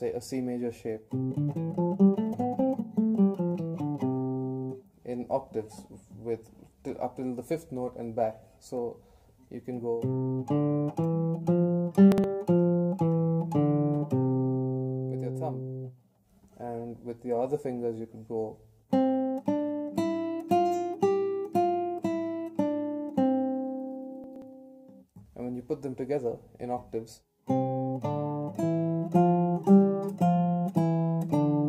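A brief jumbled stutter at 12.12–12.24 s and again at 24.24–24.42 s: chunks out of order, with a 60 ms chunk arriving one and then two chunks late, leaving hard joins.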